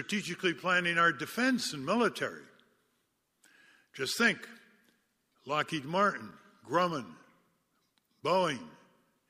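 Loose connector crackle appears from 6.31 to 6.37 s in the speech: a worn or dirty contact is briefly making and breaking, chopping the signal on and off, so a short, irregular scratchy burst cuts across the audio.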